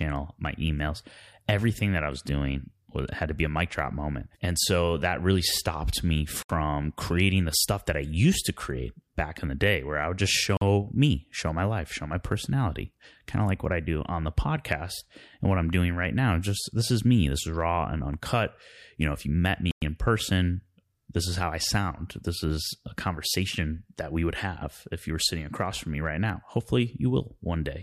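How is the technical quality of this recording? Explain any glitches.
The recording has two kinds of glitch: isolated clicks and brief dropouts in the speech.

At 1.66 s and 26.30 s there is a single sharp tick, broadband and unrelated to the speech. This is a bit error spike: one flipped bit in a single sample throws its value off by a power of two, which snaps back immediately.

At 6.43 s, 10.57 s and 19.71 s the sound cuts to silence for 68 ms, 44 ms and 107 ms, then resumes. This likely comes from a Bluetooth stall, where interference delayed packets and the headphone buffer ran empty until they arrived.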